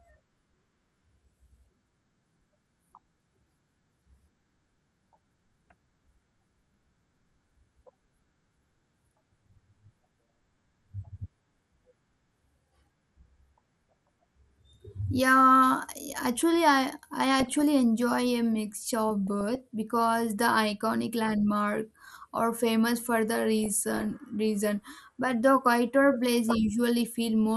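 MP2 compression runs throughout: the speech sounds dull and gurgling, with flickering upper bands, pointing to likely Layer II coding at around 80 kbps.

DAB burbling at 13.63 to 14.11 s, 17.39 to 17.61 s after "I I", 19.27 to 19.61 s, and 23.63 to 24.07 s between "are famous for the" and "reason but the quieter": bit errors get into the MP2 audio data, putting short blips of noise into single sub-bands.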